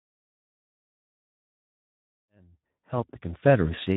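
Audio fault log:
Throughout: Speex codec. The speech is audibly hoarse and noisy, with a grainy, buzzy edge, as the CELP coder has too few bits to model the excitation properly, which fits a bitrate near 11 kbps. The deliberate fade-in toward 3.69 s is smooth.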